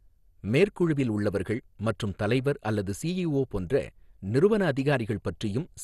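Speech running the full clip with no content above about 12.1 kHz, a dull top end, and a plainly audible gurgling, granular roughness, likely from MP2 compression at a low bitrate, consistent with about 64 kbps. Unlike a plain low-pass filter, which only dulls the sound, here upper sub-bands flicker on and off and the remaining bands are coarsely quantised, giving the churning grain heard on low-rate digital radio rather than a clean loss of treble.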